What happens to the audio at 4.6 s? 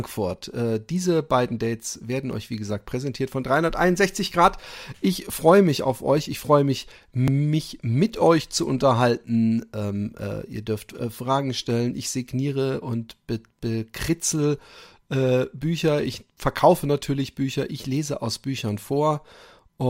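Periodic USB or driver dropouts run from 2.33 to 7.28 s, so 4.6 s falls inside the affected stretch. Something is stalling the USB bus or audio driver every 0.99 s, and each stall skips about 10 ms of audio with no fill, so the speech jumps forward slightly. Across roughly seven such gaps, this produces a steady tick or pop about once per second, heard only while speech is present.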